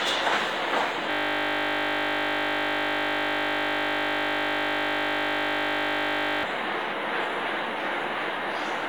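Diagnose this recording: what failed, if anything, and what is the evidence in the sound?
The driver or buffer stage froze while the hardware kept replaying one 20 ms buffer, a system hang loop: from 1.11 to 6.43 s the sound becomes a steady 50 Hz buzz.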